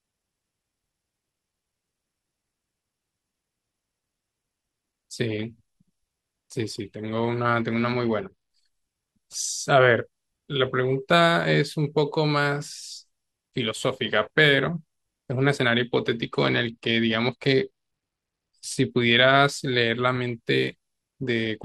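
At 7.60 to 8.51 s, 16.21 to 18.91 s and 21.22 s to the end, the speech dulls and turns gritty. Each is a Bluetooth SBC bit pool drop. Starved of bits, the upper sub-bands get few bits or none and the rest quantise coarsely. The sound fits a fall from bit pool 31 to about 13, near 94 kbps.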